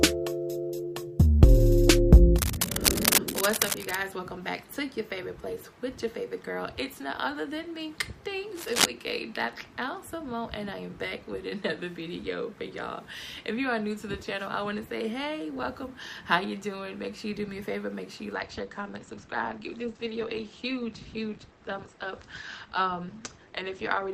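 Two bursts of scratchy, rustling noise sit right over the audio, from 2.38 to 3.98 s and again from 8.55 to 8.86 s, at roughly the same level as the sound itself. That's cable scratch noise, likely a worn cable or connector being moved. From 18.33 s to the end the quality drops suddenly with no gap: nothing above 8.7 kHz and more codec grit. That's an adaptive stream at a lower bitrate, which fits Opus stepping from 64 down to 16 kbit/s.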